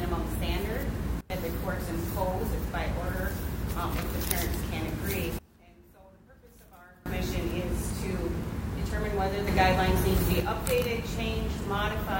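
At 1.21 s the level drops by about 24 dB in one step and springs back at 1.30 s. The same sudden gain jump returns from 5.39 to 7.06 s, another drop of about 24 dB, and then from 9.47 to 10.40 s the level leaps up by about 6 dB instead. Each time the sound and the background noise shift together with no fade, so it's likely a gain setting being applied without a ramp.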